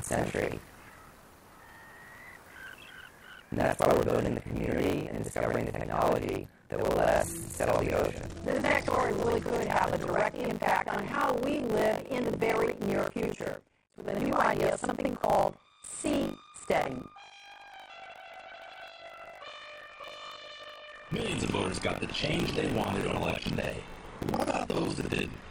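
A steady robotic buzz at 50 Hz rattles through the audio whenever signal is present, from start to end. This is buffer tearing: writer and reader have slipped, so roughly 40% of each 20 ms buffer holds audio from around 70 ms earlier, hard-joined on both sides.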